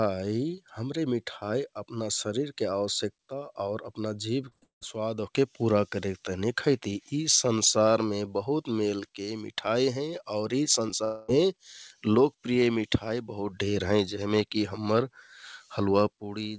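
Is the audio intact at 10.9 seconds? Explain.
No. At 10.87 to 10.90 s the speech briefly smears into a short wobble, and a quick consonant there may be swallowed. This is short concealed packet loss: about 20 ms of audio never reached the decoder in time, so the receiver invented roughly 11 ms by extending the preceding sound, following its pitch if voiced or as shaped noise if not, then crossfaded back into the real signal.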